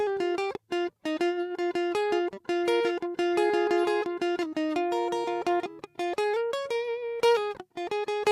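No technical faults are audible.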